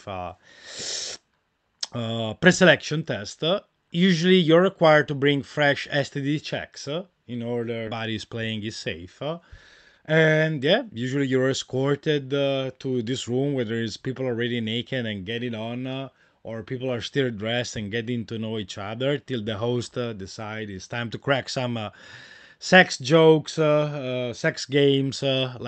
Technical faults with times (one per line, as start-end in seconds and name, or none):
7.87-7.89 skip ahead
9.64-11.27 jitter buffer speed-up